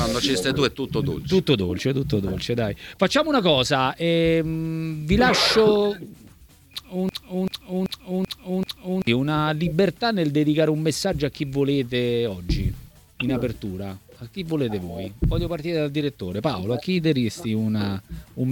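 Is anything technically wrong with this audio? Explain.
Yes. From 7.09 s to 9.07 s there is a broken-record loop: a fragment of about 0.39 s plays five times back to back, identical each time, with the audio that belonged in that stretch missing. The likely cause is a stall in the player, encoder or stream, which kept re-sending the last chunk it held until data resumed. It sounds like a stuttering, mechanical repetition that then jumps ahead.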